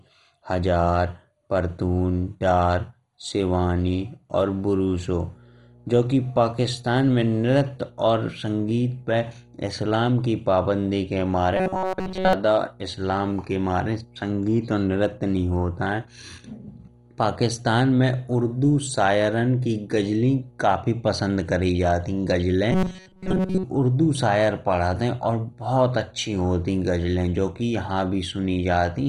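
MP2 compression runs through the whole of this speech clip: the sound is dull and gurgling. That is likely the work of MPEG Layer II coding at a rate near 56 kbps. With so few bits to share among its 32 sub-bands, the coder has shut off the upper bands entirely and quantised the remaining ones so coarsely that a heavy granular smear clings to every syllable. Mains hum enters at 5.01 s and continues to the end. It is a steady 60 Hz tone sitting about 30 dB below the speech, the signature of a ground loop or a nearby transformer bleeding the power line into the signal path. Robotic sound from repeated short buffers appears from 11.56 to 12.33 s and again from 22.71 to 23.64 s. In both stretches the voice collapses into a rigid metallic buzz at 188 Hz that only loosely tracks the speech. That pitch corresponds to a repeat period of about 5.3 ms, likely a playback buffer running dry, with the software looping the same few milliseconds while fresh audio is dropped. 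Most of the first stretch and all of the second are replaced this way.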